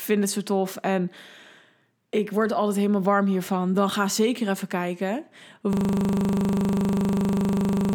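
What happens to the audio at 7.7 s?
At 7.7 s the audio is stuck in a system hang loop that began at 5.73 s, just after "ga zeker even kijken", and runs to the end of the clip. The host or driver froze while the sound hardware kept replaying the same 40 ms ring-buffer segment, dozens of identical repeats. Because the loop is so short, it cycles at 25 Hz and comes across as a steady, rough buzz rather than a distinguishable stutter.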